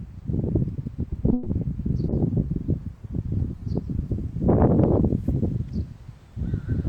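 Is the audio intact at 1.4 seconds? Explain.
No. From 1.33 to 1.48 s there is a call audio freeze: the last sound is stretched into a fading buzz or hiss for about 130 ms. The likely cause is delayed packets draining the jitter buffer. Playback then resumes where it stopped, so nothing is lost, but everything after runs 130 ms late.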